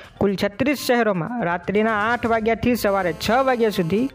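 GSM phone buzz runs from 2.87 s to 4.10 s, a hard, raspy tone at about 217 Hz, sitting roughly 22 dB below the sound. A 2G handset close to the equipment was sending its radio bursts at that rate, and some part of the audio circuit rectified the pulses, turning each burst into a click. Together they form a harmonic-rich buzz with no relation to the recording. It is nearly steady, which points to the phone being on a call.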